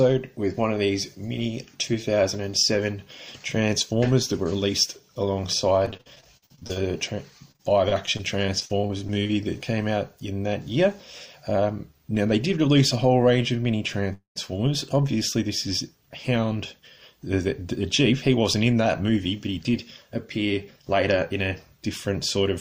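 From 5.85 to 6.78 s, and again from 7.52 to 9.31 s, repeated packet loss makes the sound choppy and robotic. There are 14 short holes in the first stretch and 13 in the second, none longer than 49 ms. Each is patched by stretching the preceding sound, which gives a stuttering texture. About a third of the first stretch is patched this way, against 15% of the second.

At 14.13 s the audio stalls for about 0.24 s in a call audio freeze. The last sound is extended and fades, then 130 ms of silence follows before the audio resumes at 14.38 s. The likely cause is held-up packets draining the jitter buffer. Nothing is lost; a gap has simply been inserted.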